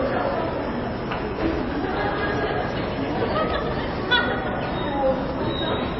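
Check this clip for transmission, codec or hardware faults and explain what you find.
One codec fault runs through the whole clip. From start to end, transcoding between lossy codecs is the likely cause. Nothing sounds above 5.8 kHz, which fits a low-rate MP3 first pass. A later WMA-style stage then spends bits on those artefacts and adds its own, so both sets are heard together.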